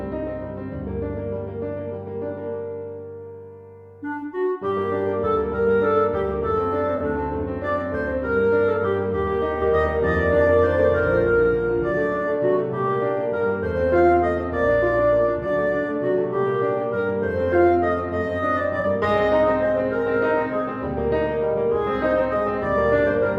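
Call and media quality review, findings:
AAC frame loss with concealment at 6.96–7.01 s and 18.80–18.85 s: brief smeared, noisy patch. About 43 ms gone each time, which fits two lost frames. Decoder filled the gap from the last good spectrum, too short to fade.

Doubled audio track, 9.62–11.92 s: second full-band copy trailing by roughly 300 ms, about 5 dB quieter, no room colour, starting and stopping abruptly. Likely the same audio captured again through a slower path and mixed in.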